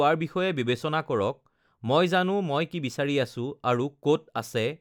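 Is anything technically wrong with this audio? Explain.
No, nothing technically wrong stood out on listening to this speech clip.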